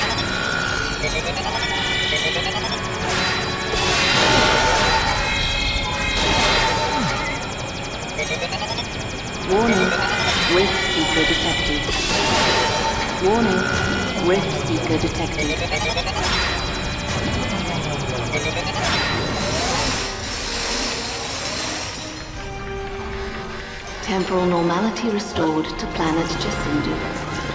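No faults detected anywhere in the clip.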